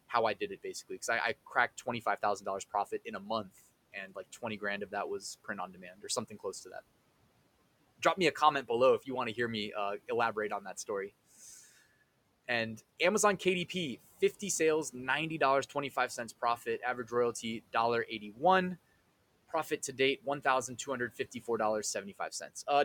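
Right after "that was print on", from 5.67 to 6.04 s, the noise suppressor clips the speech, mistaking it for the room noise sitting about 23 dB down and pulling it about 12 dB. Again at 18.08 to 18.41 s, it dips about 11 dB, leaving those bits swallowed and faint.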